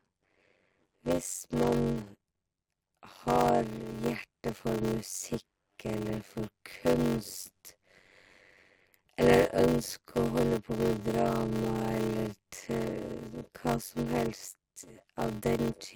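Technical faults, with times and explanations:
Throughout, block size mismatch (padded): the speech carries a steady buzz at about 93.8 Hz and runs at 0.625 times its normal speed while keeping roughly its usual pitch. One stage hands over shorter blocks than the next reads, which fits a 512-sample read filled by about 320 samples of audio and then zeros. That silent stretch in every block chops the sound at the block rate, causing the buzz, and stretches the timing.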